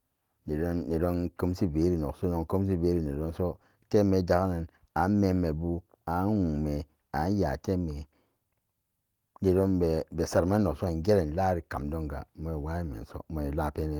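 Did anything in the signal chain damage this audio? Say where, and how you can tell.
No, nothing in the signal chain damaged this audio.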